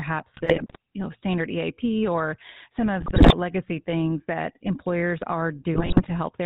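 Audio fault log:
Throughout: GSM full-rate codec. The speech sounds buzzy and gravelly, with nothing above 4 kHz. The codec models the vocal tract and drives it with a sparse pulse train. Only every third excitation sample survives, so the fine detail of the voice is lost. This roughness is plainly audible for the whole clip. It fits the 13 kbps full-rate coder.
0.34 to 0.76 s, 3.00 to 3.34 s, 5.74 to 6.32 s: GSM bit errors. The speech breaks into squawks, pops and gargling in three short bursts. Corrupted bits reach the decoder. Bad filter, pitch or gain values bend the spectrum or make the level jump frame after frame while each burst lasts. The error rate is highest in the middle burst, roughly 7 percent, against about 3 to 4 percent in the others.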